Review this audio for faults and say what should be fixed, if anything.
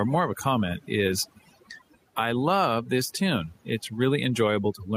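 Overdone noise removal runs through the whole clip. The background falls to near silence with twinkling specks. Bands near the noise estimate are cut hard, and quiet speech detail goes with them. Use gentler reduction, since the room noise already sits about 43 dB below the speech.

Gain pumping is also present throughout. The gain swings by about 5 dB, ducking under each loud sound. Loud and soft parts end up squashed together. The likely cause is input gain set too high, with a fast limiter pulling it down on every peak. Lower the input gain so the limiter rarely acts.

A lost packet rebuilt from error correction appears from 1.07 to 1.13 s. There is no gap, but about 40 ms sounds rougher and noisier. That points to two packets played from low-bitrate copies carried in the packets after them. Improve the network path to reduce packet loss.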